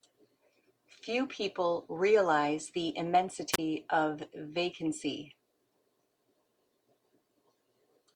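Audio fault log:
3.52–3.59 s: wireless microphone squelch dropout. The radio link from the microphone weakens, so hiss briefly swells until the receiver's squelch cuts the output, leaving a near-silent gap of about 29 ms before the speech comes back.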